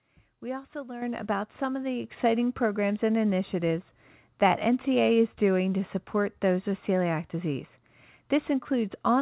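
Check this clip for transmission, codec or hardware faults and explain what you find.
One fault appears twice: the microphone volume is stepped up. At 1.02 s, just before "about some of the", the level jumps by about 8 dB, and at 2.04 s, before "programs and initiatives that", it jumps by about 4 dB more. Each time the call software judged the input too quiet and raised the device gain in a single step, so the speech and the background noise get louder abruptly and together. The signal passes through a narrowband call path with nothing above 4 kHz, which fits G.711 mu-law at 64 kbps.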